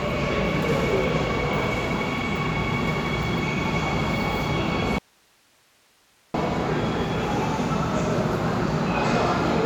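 A clip of sounds with an audio dropout to a faint residue from 4.99 to 6.34 s: roughly 1.36 s where the signal cuts abruptly to hiss about 35 dB down, likely a lost feed, not a pause or fade.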